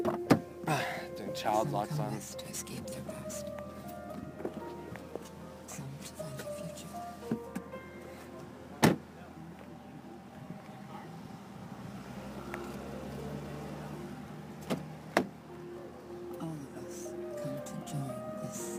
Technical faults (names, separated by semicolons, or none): sample clock jitter